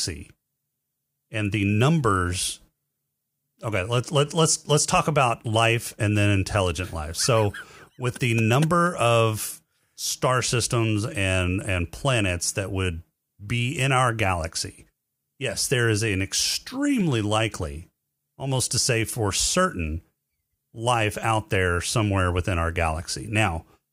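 Two isolated clicks occur in this speech, at 9.86 s and again at 17.01 s. Each is a single sharp tick, a thin vertical line through the spectrum, and its likely cause is dropped samples: a fraction of a millisecond of audio goes missing, so the waveform jumps abruptly to a later value. Unlike a dropout, no sound is audibly removed and there is no gap or muting, only the instantaneous discontinuity.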